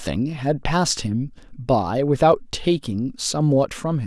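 Speech recording, with no audible technical faults.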